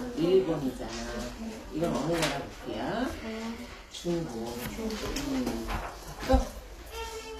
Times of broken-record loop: none

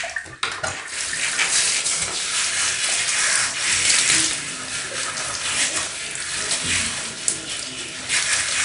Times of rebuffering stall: none

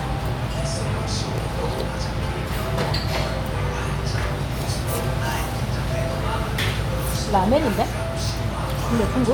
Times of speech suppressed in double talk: none

